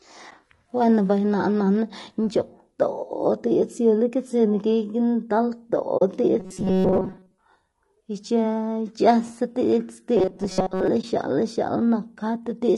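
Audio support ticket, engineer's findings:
Speech rough and grainy throughout, with noise between harmonics and a synthetic-sounding top band. Likely low-delay AAC compression (AAC-ELD), damage plainly audible, fitting about 32 kbps. Broadband, unlike the local dropouts.

Soft-edged silent hole at 5.97–6.02 s and brief dip at 11.01–11.04 s, faded out and in. AAC frame loss with muting: the decoder zeroes the lost spectrum. Fits two frames and then one frame of about 20 ms.

Rigid metallic buzz at 188 Hz, 6.40–7.39 s and 10.17–10.88 s, still loosely following the speech. Likely robotic sound from repeated short buffers: a segment of about 5.3 ms is looped while most of the real audio is skipped. It differs from frame loss because it is filled rather than silent.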